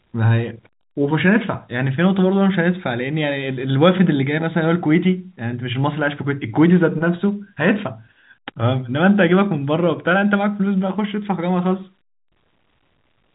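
No technical faults are audible.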